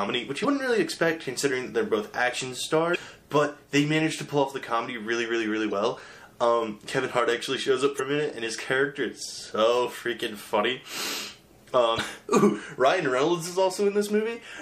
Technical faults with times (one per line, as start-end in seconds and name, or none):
0.00-14.61 MP3 compression
0.41-0.45 damaged data in a compressed stream
2.92-2.96 damaged data in a compressed stream
5.68-5.73 damaged data in a compressed stream
7.96-8.00 damaged data in a compressed stream
11.95-12.00 damaged data in a compressed stream